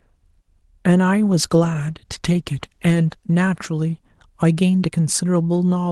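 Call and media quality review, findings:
Call bitrate drop, 1.31–3.42 s. Speech turns rough and grainy for roughly 2 s, then clears. Probable component: bandwidth estimation on the call path throttling the Opus encoder. Coarser coding at the reduced rate fits a fall from about 32 kbps to about 17 kbps. The sound returns at 3.42 s to the call path's normal Opus character, with audio band-limited near 12 kHz.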